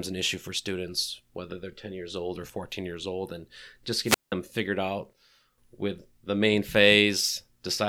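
A speech clip with a wireless microphone squelch dropout from 4.04 to 4.32 s, just after "years old and just". The radio link fades, hiss swells briefly, then the receiver's squelch mutes everything for about 0.18 s before the signal recovers at "figured out with the".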